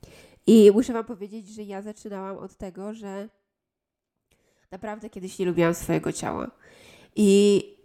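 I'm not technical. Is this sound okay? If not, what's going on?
No. From 0.6 to 1.24 s, just before "że ja zaczynałam od", and from 5.0 to 5.64 s, before "swojego ciała", there's a fine ticking. This is zipper noise: the volume moves in about thirty tiny jumps a second instead of a smooth slide.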